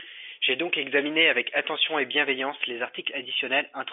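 Nothing in this speech recording stands out as a technical fault: the sound carries the narrow band of a fixed-line telephone channel, roughly 250 Hz to 3.5 kHz with nothing above about 3.7 kHz, which fits G.711 telephone coding, and its coding leaves at most a faint trace.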